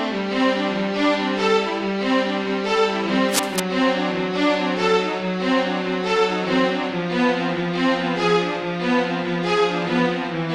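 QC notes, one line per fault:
3.27 to 3.60 s, cable scratch noise: a third of a second of dense, ragged crackle sits right on top of the sound, loud enough to nearly match it. That's likely a worn cable or connector getting nudged, its contact resistance jumping around rapidly.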